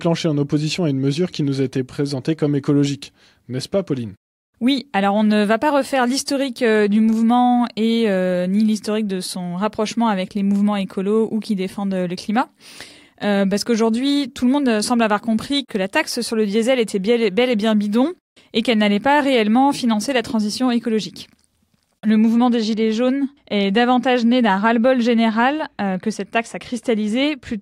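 De-emphasis applied wrongly from 22.10 s to the end: an unneeded treble cut slopes the response down about 10 dB at 10 kHz, leaving the sound dull and muffled.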